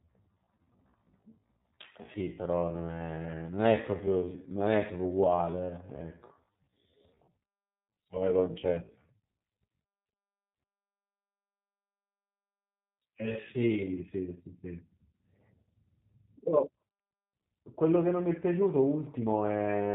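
The whole clip runs through the G.729 codec at 8 kbit/s, so nothing above 4 kHz survives and the speech comes out rough and plainly synthetic. From the start to 13.96 s there's a time-stretched section: the pace drags to about 0.69 times normal with pitch unchanged, likely from software repeating short slices to pad the length.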